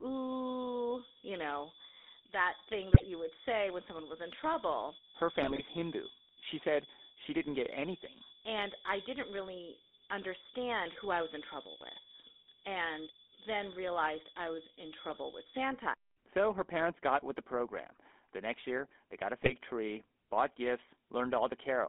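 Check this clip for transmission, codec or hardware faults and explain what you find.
The speech has been through a GSM full-rate codec for its whole length, and four short bursts of GSM bit errors damage it further.

GSM full-rate codec: the voice is rebuilt from a vocal-tract filter driven by a sparse, regularly spaced pulse excitation, which fits the 13 kbps full-rate coder. That gives a plainly audible buzzy, gravelly roughness, and the band is confined to about 250 Hz to 3.6 kHz.

GSM bit errors: at 2.94–3.07 s, 5.40–5.62 s, 15.08–15.19 s, and 19.39–19.52 s (between "year they got a" and "tree bought"), corrupted filter, pitch or gain values reached the decoder. Several consecutive frames decode wrongly, so the voice briefly squawks, pops and gargles.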